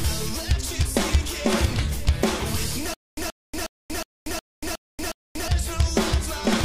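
From 2.94 to 5.48 s the audio falls into a stutter with silent gaps: a 128 ms burst repeats seven times, each followed by 235 ms of dead silence, every 363 ms. It's likely a stalled stream replaying its last fragment, and the audio that should have played there is lost.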